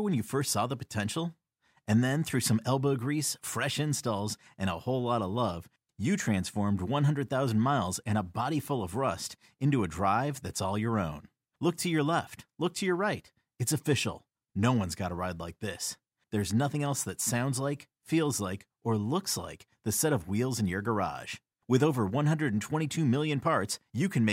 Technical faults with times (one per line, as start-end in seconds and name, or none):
none